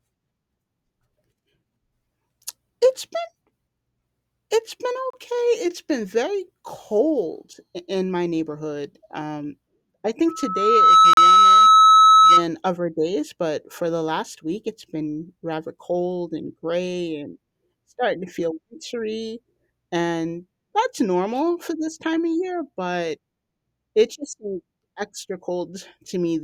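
At 5.10 to 5.14 s the speech drops out into a hard-edged hole of silence. This is a gap between stream segments. Two segments' time stamps leave about 30 ms unaccounted for, and the player fills that span with silence. The edges are abrupt, so it sounds like a brief click-bounded dropout. Nothing is lost; the sound resumes where it left off.

From 10.28 s a loudspeaker feedback squeal takes hold. A microphone is hearing the loudspeaker it feeds. At 1.3 kHz the loop gain exceeds one, so that tone keeps feeding itself. It swells over roughly 0.7 s into a piercing squeal, about 15 dB above the speech. It sits over the talking until it stops at 12.45 s.

Inside the squeal, at 11.13 to 11.17 s, comes a second segment gap of about 38 ms. It cuts the squeal and speech alike. The two gaps fall about six seconds apart, which fits six-second stream segments.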